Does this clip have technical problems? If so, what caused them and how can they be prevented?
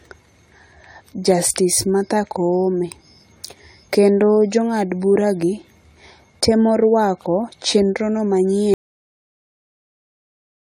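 Yes. Throughout the speech the sound is swirly, smeared and hollow, with blurred consonant attacks, more degraded than a single pass at around 64 kbit/s AAC would leave. This is likely generation loss, with the audio decoded and re-encoded roughly five times. Each pass requantises on a shifted frame grid, so noise and spectral holes accumulate. A single low-bitrate encode sounds dull or slightly watery but not this compounded smear. To prevent it, keep a lossless master and encode only once, at the final stage.

From 8.74 s, right after "temo rwako chenro no", the audio cuts out mid-flow to silence that lasts to the end of the clip. This is an audio dropout to silence. The input was likely lost through a disconnected device, a failed link or a stray mute while the recorder kept writing silence. It differs from a gate or a fade because the cut is abrupt and no room tone remains. To prevent it, secure connections and monitor input levels while recording.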